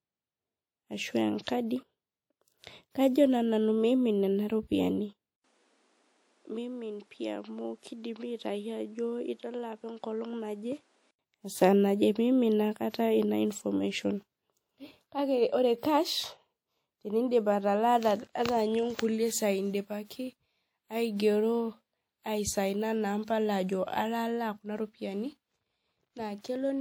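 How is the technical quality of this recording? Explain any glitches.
Two kinds of glitch stand out in the speech: a couple of pre-echo smears and a stretch where the sound seems to come from a different, poorer input.

Pre-echo hits around 1.44 to 1.47 s and again at 20.07 to 20.10 s, each spreading about 30 ms ahead of a sharp attack. The codec spreads quantisation noise across the whole block, so a short hiss leaks in before the onset and the attack sounds softened.

From 5.36 to 11.19 s, the sound drops out for 80 ms at the switch, then goes duller and boxier, with nothing above 11.6 kHz, about 10 dB quieter, and its own background noise roughly 35 dB down. That's likely an input switched to a poorer device mid-recording.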